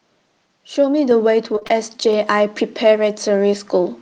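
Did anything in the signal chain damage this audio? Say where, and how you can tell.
Yes. At 1.11 s and again at 2.13 s the speech and background jump louder together, by about 4 dB then about 3 dB. This is a microphone volume stepped up by the call processing's automatic gain.

From 1.55 to 1.78 s the speech turns choppy and robotic, with four brief holes up to 26 ms. This is repeated packet loss on the network, each gap patched by extending the previous sound.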